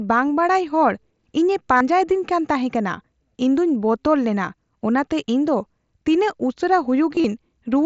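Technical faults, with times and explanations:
1.77–1.81 s, concealed Bluetooth headset packet loss: about 38 ms of audio never arrived, which fits five consecutive 7.5 ms headset frames. The receiver patched the gap by repeating the closest-matching stretch of the preceding waveform. Instead of a silent dropout or click, you hear a short buzzy, steady-level tone, then a slight warble as the real audio resumes.
7.15–7.24 s, concealed Bluetooth headset packet loss: about 53 ms went missing, scattered across 90 ms, with the longest unbroken run lasting 30 ms. The longer run comes through as a buzzy tone with a small warble where real audio returns. Surrounding audio stays within the mSBC headset band, up to 8 kHz.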